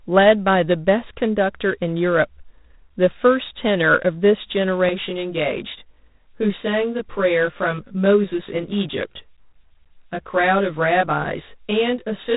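A harsh, rasping hiss that rises and falls with the speech runs throughout, with nothing above 3.8 kHz. This is G.726 ADPCM coding, which fits its 24 kbit/s mode. From 4.89 s to the end, the sound turns rough and slightly doubled. This is channel delay (comb filtering): one channel lags by about 20 ms before the mono sum, carving evenly spaced notches from around 30 Hz upward.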